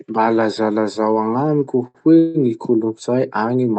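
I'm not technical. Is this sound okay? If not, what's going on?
No. A short stall from a late packet happens at 1.87 to 1.98 s, right after "lazalazao agnamiko". A piece of the call data arrived late, so the receiver stretched the last bit of speech for about 72 ms, then picked up where it left off. Nothing is lost.

A call audio freeze follows at 2.19 to 2.37 s, after "lazalazao agnamiko hoe". The speech stops moving and a fading buzz fills about 159 ms without going fully silent. The likely cause is data held up on the network, after which the speech resumes with nothing missing.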